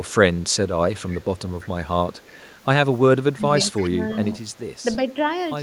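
Speech, with an echo leak that keeps creeping in: a faint copy of the voice trailing about 339 ms behind, in brief scraps at 0.05–0.14 s and 0.49–0.56 s, then a longer stretch from 0.96 to 2.55 s, and again at 3.39–4.39 s, where it's loudest, though still well below the talker. That's likely a far-end speakerphone whose echo canceller isn't fully removing what its mic picks up. Between 3.35 and 4.09 s there's also speech suppressed in double talk. The voice dips by up to around 10 dB, for about half a second in total, while that echo overlaps it, which points to the canceller ducking everything when both sides seem active.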